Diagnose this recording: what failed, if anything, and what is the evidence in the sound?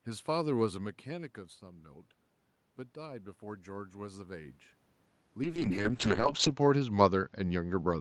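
A call bitrate drop hits the network and codec stage at 5.44 s and lasts to the end. The speech turns coarse and muffled, and its top end narrows to 8 kHz. The worst stretch lasts about 1.09 s. This fits the Opus encoder falling from about 32 kbps to 6 kbps after a bandwidth estimate collapsed.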